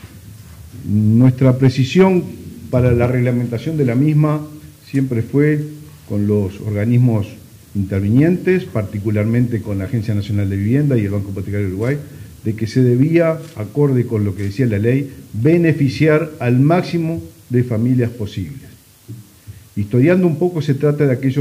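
The audio has hard clipping in five bursts. Peaks are driven past the ceiling of a stage that cannot pass them, so their tops are cut flat. Those flat tops add high harmonics. The worst burst runs from 1.21 to 2.07 s, at about 4 dB over. Shorter crackly bursts follow at 2.86 to 3.05 s, about 2 dB over; 8.18 to 8.25 s, about 1 dB; 12.78 to 13.16 s, about 1 dB; and 15.46 to 16.10 s, about 2 dB.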